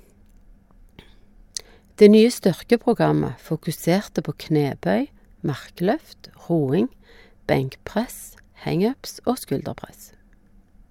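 Nothing stood out on listening to this speech recording.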